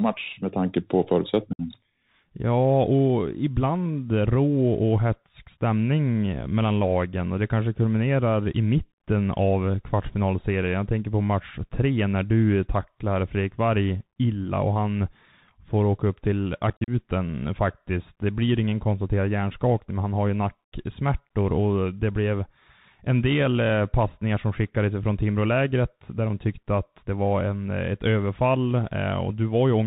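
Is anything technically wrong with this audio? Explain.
Yes. Throughout the clip the speech has been carried over a Bluetooth CVSD headset codec, the narrowband link used by hands-free headsets. CVSD sends a single up-or-down bit per sample and adapts its step size as it goes, a scheme that fits a 64 kbps stream, and it passes nothing above 4 kHz. The result is plainly audible: muffled, band-limited speech, scratchy s sounds, distortion where loud high-frequency energy outruns the step size, and a granular hiss beneath the voice.

There are also two bursts of unconcealed Bluetooth headset packet loss, where short voice packets between headset and phone went missing and nothing was done to cover them. At 1.53 s, just after "med tanke på", about 60 ms disappears, roughly seven packets, leaving an abrupt hole with hard edges. At 16.70 s, following "får åka upp till", around fifteen packets totalling 97.5 ms drop out scattered over 180 ms, the longest gap 45 ms, so the speech turns briefly chopped and crackly.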